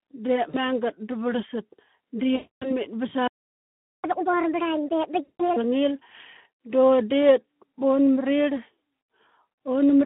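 Throughout, the speech carries Speex codec damage: a hoarse, noisy grain inside a narrow telephone band of roughly 150 Hz to 3.4 kHz, which fits a Speex stream near 11 kbps. Unlike broadband hiss, the roughness rides on the voice itself.

At 0.49 to 0.56 s, just before "da varlsat", VoIP packet loss concealed by the speech codec fills about 40 ms. The decoder stretches its last pitch and filter into a short fill. Because it extrapolates instead of leaving silence, there is no clean dropout or click. A longer gap at 2.35 to 2.75 s, about 260 ms, turns into a stretched sound that gradually fades, and the voice stays weak and smeared briefly afterward as the decoder recovers.

From 4.04 to 5.56 s the player does a catch-up at higher speed, running at 1.5 times normal speed. Because it resamples rather than time-stretching, pitch rises with tempo, about seven semitones. The voice sounds chipmunk-like and hurried and then settles back to normal. 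That shared rise in pitch and pace separates it from naturally fast talking.

Inside that stretch, at 5.23 to 5.44 s, another concealed loss of about 160 ms adds a fading stretched sound at the raised pitch, followed by a brief weak, distorted recovery.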